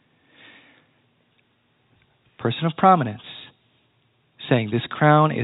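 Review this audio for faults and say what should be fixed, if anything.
No faults; nothing needs fixing.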